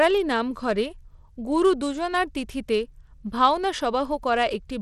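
From start to finish the speech carries plainly audible coding damage, most likely Bluetooth SBC compression. The sound has a gritty, grainy edge: with few bits to share, the codec's wide sub-bands are quantised coarsely and the weaker upper bands starve. The damage points to a low bit budget, around 96 kbps. On a spectrogram, content stops at a hard ceiling of 20.8 kHz, and the upper bands look blotchy and patchy rather than smooth.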